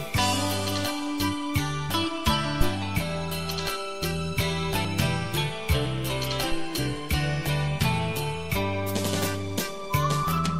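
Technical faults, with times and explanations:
2.61–2.74 s, phantom power thump: a single deep, low-frequency thump breaks into the audio, with a fast decay of about 29 ms before the disturbance dies away by 2.74 s. This is the signature of a supply voltage being switched on a live input. The sudden DC step passes through the coupling capacitors as a transient, which is heard as a dull bump rather than a click because the energy sits mostly at low frequencies.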